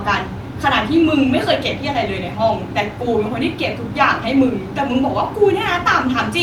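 A speech recording with nothing technically wrong with it.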